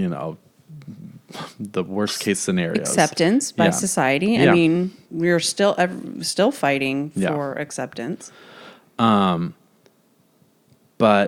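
No technical faults can be heard anywhere in this speech recording, and the signal stays continuous and intact throughout.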